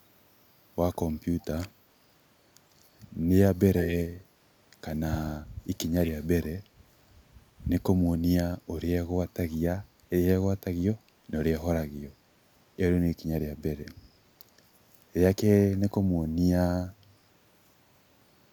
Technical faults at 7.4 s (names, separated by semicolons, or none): none